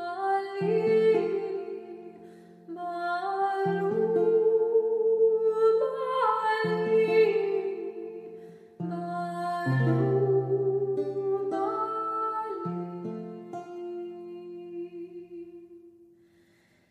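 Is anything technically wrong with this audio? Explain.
No, nothing technically wrong stands out here; it all sounds just as it should.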